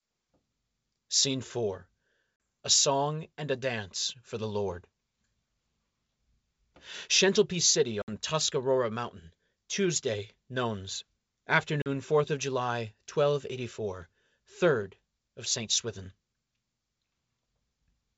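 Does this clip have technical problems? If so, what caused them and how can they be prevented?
Yes. Packet loss on an ADPCM call causes hard-edged silent gaps at 2.36–2.40 s (40 ms), 8.02–8.09 s (about 60 ms) and 11.82–11.89 s (40 ms), each pointing to a few lost packets. After each hole, the decoder's predictor and step size no longer match the sender's, so the speech comes back slightly distorted before settling. Prevention: use a jitter buffer with packet-loss concealment and forward error correction or redundancy on the network path.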